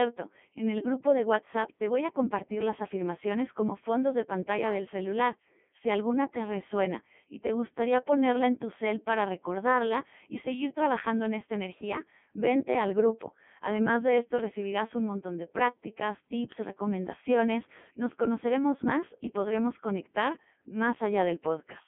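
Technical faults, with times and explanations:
Throughout, Codec 2 vocoder. The speech sounds robotic and buzzy, band-limited to roughly 200 Hz to 3.4 kHz. This codec keeps only pitch, voicing, energy and spectral shape, then rebuilds the voice from sine waves. At about 3.2 kbit/s the damage is heavy.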